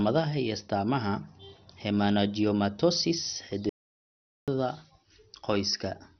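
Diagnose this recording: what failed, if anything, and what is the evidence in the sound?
The codec stage likely ran MP2 compression starved of bits, which fits roughly 48 kbps. Nothing survives above 6.2 kHz, and heavy gurgling, granular quantisation leaves the speech dull throughout.

The input was likely lost at the capture or link stage, so silence was written. From 3.69 to 4.48 s, about 0.78 s drops out to silence with no room tone.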